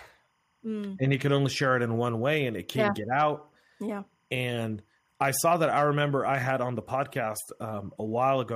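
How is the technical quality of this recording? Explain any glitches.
The recording has one fault, present for its whole length: timecode bleed sitting faintly underneath the speech.

Timecode bleed runs from start to finish. A linear timecode signal from an adjacent track or cable has coupled into the audio path. That code is a square wave that flips between two frequencies, here near 1 kHz and 2 kHz, and its pattern repeats in a way that fits 25-frame timecode. It sits roughly 45 dB below the speech, heard as a thin, continuous chirping warble behind the talker.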